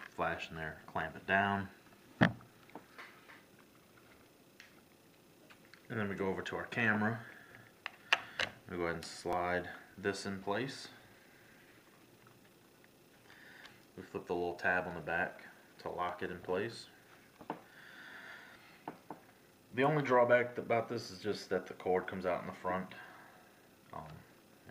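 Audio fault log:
3.32, 9.33, 15.33 and 21.34 s: overlapping chunks. The audio is split into 6.0 s chunks, and each new chunk starts 6.5 ms before the previous one ended. That sliver plays twice at every join, giving a short click or stutter at a steady interval.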